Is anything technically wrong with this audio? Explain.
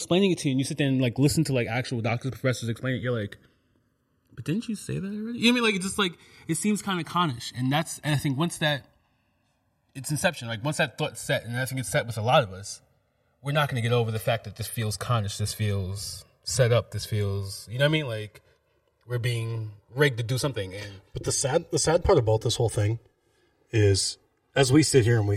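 Yes. Throughout the speech, the channels are drifting apart: the left and right channels were captured on devices running from separate clocks that disagree by roughly 100 parts per million, so the delay between them grows steadily, reaching around 3 ms by the end. When the two are summed to mono, the resulting comb-filter notches slide gradually through the spectrum, and the speech takes on a slow, sweeping flanging quality.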